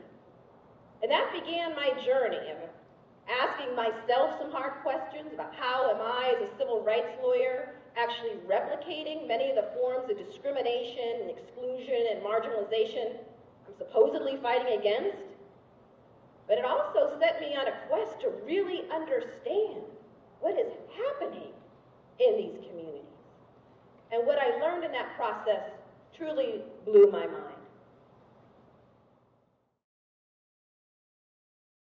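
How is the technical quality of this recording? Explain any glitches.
Nothing stood out as a glitch or technical problem anywhere on listening to this recording.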